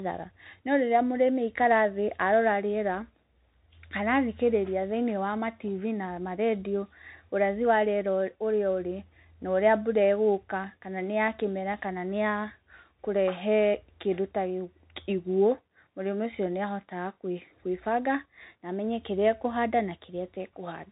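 Speech that sounds boxed-in and narrow throughout, with nothing above 3.8 kHz, scratchy s sounds, distortion on loud bright sounds, and a grainy hiss underneath. This is the Bluetooth CVSD headset codec: its one-bit, adaptive-step coding, which fits a 64 kbps link, can't keep pace with fast high-frequency changes.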